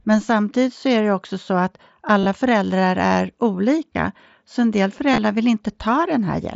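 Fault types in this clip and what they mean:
Concealed Bluetooth headset packet loss, at 2.20 to 2.26 s, at 3.93 s and at 5.12 to 5.18 s: voice packets between headset and phone went missing, and the receiver filled each gap by repeating the closest-matching stretch of recent waveform. The brief loss just before "så en del" lasts about 15 ms. The other two, after "det också så att" and after "så en del", are scattered over about 60 ms and leave a short buzzy, held tone with a slight warble as the real audio returns.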